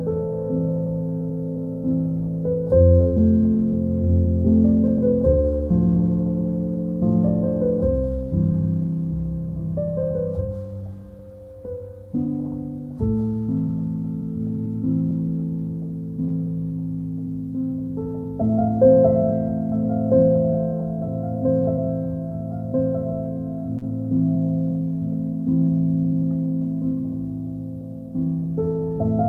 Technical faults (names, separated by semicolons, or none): short concealed packet loss; short stall from a late packet